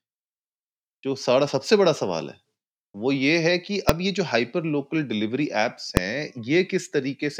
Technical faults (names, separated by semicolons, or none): invalid numbers at full scale